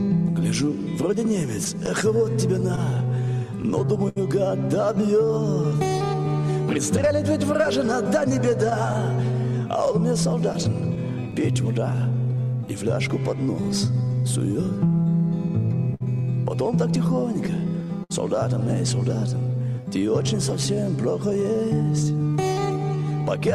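The audio suffers from clock drift between sender and receiver. The sender's clock runs roughly 5 percent slower than the receiver's. The receiver's buffer keeps draining, so it must stretch the sound to stay in step. Uneven small hiccups recur across the whole clip.

Repeated timing corrections run from 0.08 s to 23.13 s. Playback sits at about 97 percent speed. Short repeated pieces add about 0.7 s in total. All edits go the same way, unevenly spaced.

Scattered short gaps appear from 1.65 s to 18.12 s. There are around thirty of them, the longest near 70 ms, about half a second in all. A second cluster of four brief gaps, each under about 15 ms, falls between 20.26 s and 21.36 s. Each hole was patched by extending the last sound, giving brief ticks and smears. These fit late or lost packets.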